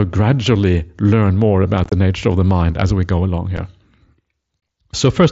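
Unconcealed Bluetooth headset packet loss: over the mSBC link, voice packets go missing and silence fills the gaps, with nothing patching them. The speech is chopped with abrupt holes from 1.84 to 1.92 s, at 3.57 s, and from 4.60 to 4.62 s.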